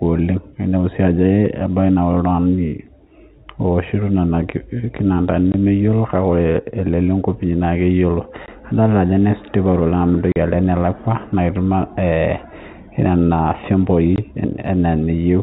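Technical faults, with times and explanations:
5.52–5.54 s, 8.46–8.48 s, 10.32–10.36 s, 14.16–14.18 s: packet loss filled with silence. The speech cuts abruptly to dead silence for 20 ms, and 40 ms at 10.32 s, with hard edges. The hole lengths fit 20 ms packets lost and replaced with silence, heard over the band-limited G.711 telephone coding.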